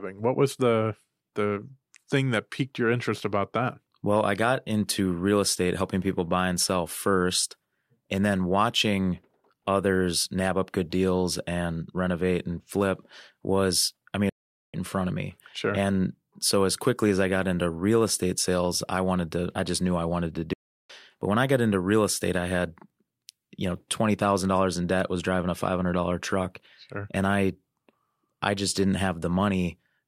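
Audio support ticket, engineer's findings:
Playback stall, 14.29–14.74 s: speech cuts to silence for about 0.44 s after "was I mean it", resumes with "in front of me". Likely player buffer underrun or blocked output thread; output starved until data arrived.

Playback stall, 20.53–20.90 s: second dropout after "knew I wanted to", about 0.36 s of silence mid-flow, then speech continues. Likely the same starved playback path, recovering after a shorter gap.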